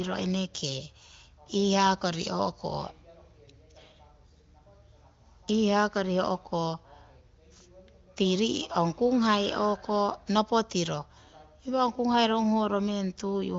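No technical faults are present: the speech arrives over an AMR wideband (HD Voice) link at 23.05 kbit/s, near the top of that codec's range, so the band stops at 7 kHz and any coding effects are faint at most.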